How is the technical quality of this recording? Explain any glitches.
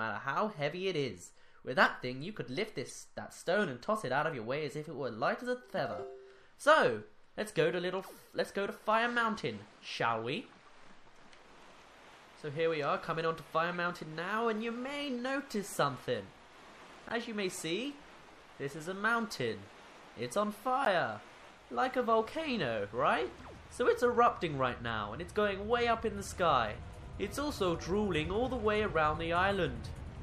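The technical quality is compromised in two ways: heavy lossy coding throughout and six brief decoding glitches.

Across the whole recording there is plainly audible MP3 compression damage, likely the cause of the dull, watery sound, and consistent with a low bitrate around 64 kbps. Short of bits, the encoder removes the treble above a fixed frequency and discards weak spectral lines, which flicker in and out between frames. On a spectrogram this shows as a hard horizontal ceiling on the high frequencies, with patchy, blotchy holes beneath it. It sounds swirly, with smeared attacks.

The corrupt frame decoded faults occur at 1.84–1.87 s, 2.88–2.92 s, 5.77–5.80 s, 13.69–13.76 s, 17.09–17.16 s and 20.85–20.87 s, each covering one to three frames. Damaged bits led the decoder to misread gains or codes and put energy at the wrong frequencies for the length of those frames. Each is heard as a short chirp or burst of noise, peaking at about −15 dBFS at 20.85 s, about −25 dBFS at 1.84, 5.77 and 17.09 s, and about −35 dBFS at 2.88 and 13.69 s. 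On a spectrogram each appears as a narrow vertical block of misplaced energy, and on the waveform as a brief irregular spike.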